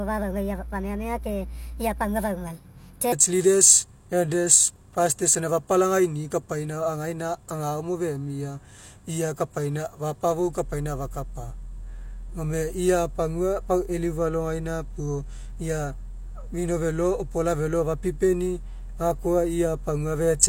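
From 0.00 to 3.12 s the speech plays back as a section at the wrong speed, running about 1.39 times faster than normal. Because speed and pitch move together, the voice is raised by roughly five semitones and sounds high and hurried, then drops abruptly to its natural rate and pitch at 3.12 s. The likely cause is that this opening section was resampled or clocked at the wrong rate during editing or playback.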